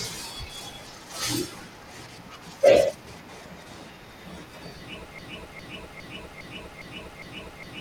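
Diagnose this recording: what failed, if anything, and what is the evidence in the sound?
Broken-record loop from 5.19 s to the end: a 0.41 s speech fragment repeats six times, likely a stalled playback buffer resending its last block.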